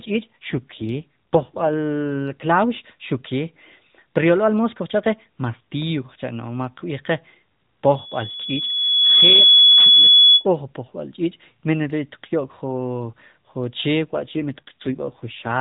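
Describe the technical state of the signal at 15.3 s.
At 15.3 s an AMR rate drop is in effect, from 14.04 to 15.50 s. The band and continuity hold, but the speech turns rougher and more synthetic, which fits a switch from 12.2 kbps to 5.9 kbps.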